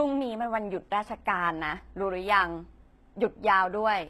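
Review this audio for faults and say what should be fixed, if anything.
The sibilants sound gritty and lispy throughout the speech, with a synthetic, metallic top end and nothing above 12.3 kHz. Likely HE-AAC compression at a low bitrate, around 16 kbps: treble is rebuilt from copied lower bands rather than coded, so its harmonics don't match. Encode at a higher bitrate, or with plain AAC, to keep the real treble.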